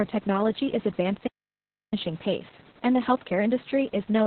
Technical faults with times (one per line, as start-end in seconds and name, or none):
0.00-4.26 Opus voice compression